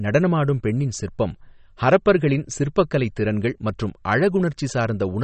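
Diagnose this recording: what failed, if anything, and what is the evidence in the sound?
MP3 compression runs through the whole speech clip, a codec-stage fault. Nothing is heard above about 8.3 kHz, and the damage is plainly audible: a watery, swirling texture with metallic chirps on s sounds and smeared attacks. This is likely an MP3 encoder starved of bits, which fits a rate near 32 kbps. It drops the treble at a fixed cut-off and zeroes weak frequency lines that flicker on and off between frames.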